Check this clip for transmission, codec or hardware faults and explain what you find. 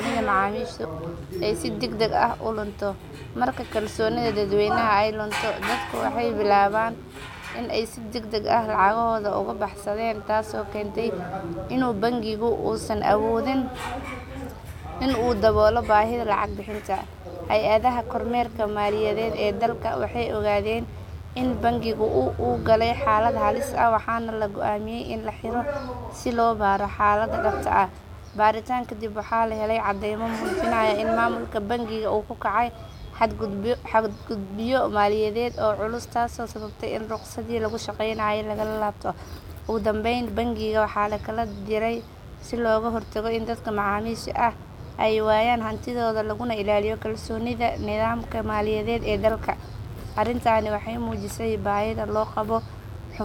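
The clip carries one hardware fault: mains buzz, present for the entire length of the speech. It comes from 50 Hz mains interference. Something like a dimmer, a rectifier or an unshielded run injects sharp switching spikes into the signal path twice per mains cycle, so they repeat 100 times a second. Because the spikes are narrow, their harmonics of 50 Hz extend up into the kilohertz range rather than staying a low hum. The result is a steady, raspy buzz sitting roughly 30 dB below the speech.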